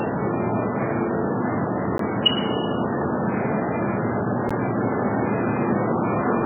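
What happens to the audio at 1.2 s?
At 1.2 s the sound is dull and watery, with a swirling, metallic shimmer and smeared attacks. Nothing is audible above about 3.1 kHz. This damage runs through the whole clip, not just this moment. It is likely heavy MP3 compression at a very low bitrate, around 8 kbps. Starved of bits, the encoder removed the treble above that cut-off and zeroed weak frequency lines, which flicker on and off from frame to frame and produce the swirl.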